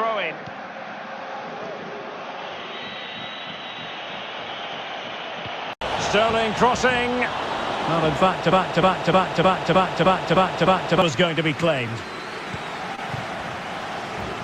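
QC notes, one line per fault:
0.00–5.81 s, input switched to a poorer device: the sound is band-limited with nothing above 6.5 kHz, sits about 5 dB lower, and carries its own noise roughly 35 dB down, then clears after an 80 ms silence, likely a change of microphone rather than filtering.
8.52–11.02 s, broken-record loop: one 0.31 s fragment repeats identically eight times back to back. The exact, unchanging repeats distinguish it from echo or stutter. The audio that belonged in those 2.5 s is gone, likely from a stalled player or stream.
12.95–13.00 s, short concealed packet loss: a brief smear where 20 ms never arrived and the decoder synthesised 22 ms by extending the preceding sound before blending back. It is a continuation rather than silence, which separates it from a dropout or a click.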